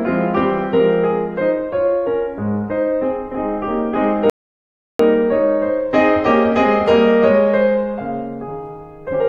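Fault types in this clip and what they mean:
rebuffering stall: The music drops to silence at 4.30 s and resumes at 4.99 s exactly where it broke off, with nothing skipped. The player ran out of downloaded audio and waited 0.70 s for more, which lengthens the clip.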